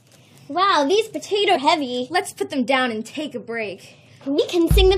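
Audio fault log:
1.54–1.57 s and 4.38 s, damaged data in a compressed stream: corrupted bytes in the encoded stream made the decoder misread those frames, lose sync and hunt for the next valid frame header, so the audio breaks into a short chirp or blip at each point.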